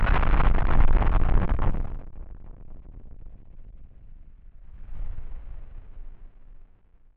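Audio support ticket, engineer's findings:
Zipper noise, 1.71–2.10 s: ticking during a drop of roughly 20 dB, 1 dB steps at around 100 per second; gain stage applying unsmoothed per-buffer steps. Same zipper noise at 4.56–5.00 s during a rise of roughly 20 dB.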